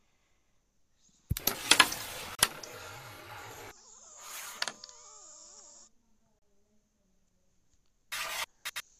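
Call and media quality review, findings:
Brief dropouts in continuous sound at 2.35–2.39 s (about 37 ms) and 6.39–6.42 s (32 ms), about 4 s apart, with smeared edges; the sound resumes where it stopped. Gap at a join of encoded pieces: encoder start delay and last-frame padding left untrimmed.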